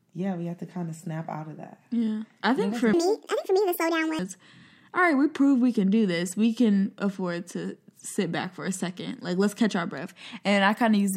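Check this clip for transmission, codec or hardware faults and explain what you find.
One fault stands out. From 2.93 to 4.19 s, right after "I think for", a section at the wrong speed runs 1.76 times fast, likely from a clock mismatch, lifting the speech about ten semitones. Unlike a pure pitch shift, tempo and pitch rise together.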